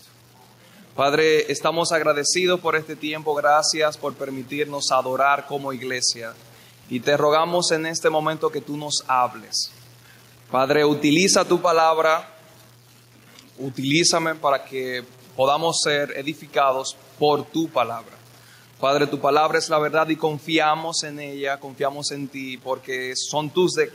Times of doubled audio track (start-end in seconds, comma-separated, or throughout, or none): none